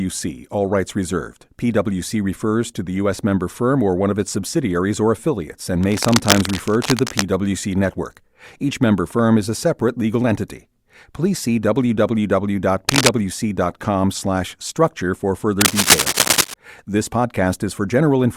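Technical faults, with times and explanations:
5.83–7.23 s, 12.89–13.09 s and 15.60–16.54 s, cable scratch noise: a worn cable, plug or control was likely being moved, so its contact resistance jumped about erratically and fed ragged bursts of noise into the signal. This is heard as scratchy rustling over the speech. In the first burst it sits a little below the speech level. In the short second burst and the longer third one it rises slightly above the speech.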